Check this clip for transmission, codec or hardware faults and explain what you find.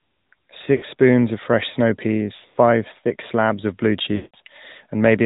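Two faults are present: plainly audible mobile speech coding throughout, and three bursts of lost AMR speech frames.

AMR narrowband mobile codec: For the whole clip, the speech is band-limited to nothing above 4 kHz. The sound points to a mid-rate mode of about 10 kbps. The pulse-driven vocal tract model leaves the voice plainly buzzy and synthetic. Unlike simple low-pass filtering, there is a coded, buzzy, synthetic quality.

Lost AMR speech frames: At 0.76 to 0.85 s, about 60 ms of frames is lost just before "spoons of fresh snow". From 2.36 to 2.58 s, between "spoons of fresh snow" and "thick slabs of blue", 180 ms of losses are scattered over 200 ms, with the longest run 100 ms. At 4.16 to 4.36 s, right after "thick slabs of blue", 180 ms is lost. The decoder repeats the last good pitch and vocal tract settings at falling gain, so the sound smears into a drawn-out buzz and fades before recovering weak and rough. 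A plain dropout would cut to silence abruptly instead.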